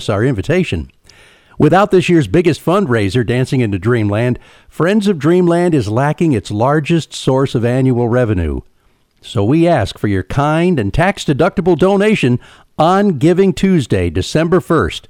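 Hard clipping runs throughout the speech, driven about 6 dB past full scale: a small fraction of peaks flatten, crackling on loud syllables, with squared waveform tops and high-frequency spectrogram smears.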